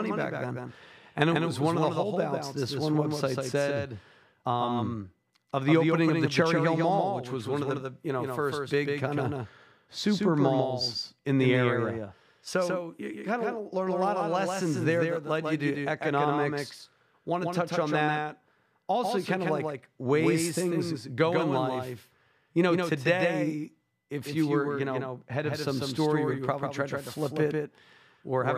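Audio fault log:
throughout doubled audio track: the speech is shadowed by a full-band copy trailing about 150 ms behind and roughly 5 dB quieter, with no decay or room colour, giving a dry slapback; likely the same signal reaching the mix twice through a slower path.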